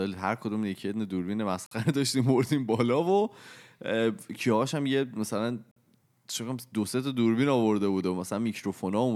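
Speech, with a gap between chunks showing up twice: a 50 ms hole of silence at 1.66 s and again at 5.71 s. They sit 4 s apart, so the audio was handled in 4-second pieces and each join picked up a bit of dead air, with nothing actually dropped.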